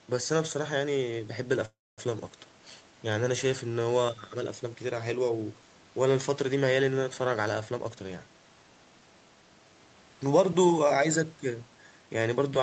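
From 1.65 to 2.00 s the speech stalls: the last sound lingers as a fading buzz, then about 240 ms of silence, before continuing intact. This is a call audio freeze, likely from delayed packets draining the jitter buffer.

Between 7.70 and 10.10 s the speech sounds hurried, running at 113% speed with unchanged pitch. This jitter buffer speed-up trimmed roughly a third of a second of pitch periods to shrink excess delay.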